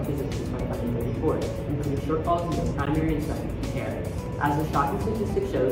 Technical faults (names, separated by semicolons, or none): gap at a join of encoded pieces